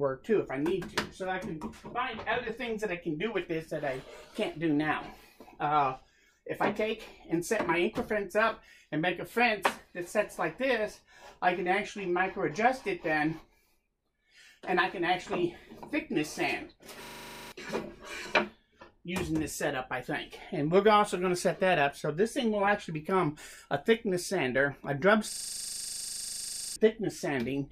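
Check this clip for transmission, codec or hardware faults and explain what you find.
There's a hardware-side fault here, a system hang loop, and it hits twice: 17.04 to 17.52 s and 25.32 to 26.76 s. The machine stalled while the audio device kept replaying the same 40 ms chunk of its ring buffer. At 25 repeats a second that comes across as a steady buzz rather than a stutter. The first hang loops 12 times and the second 36 times. Each one swallows real audio, roughly half a second and a second and a half.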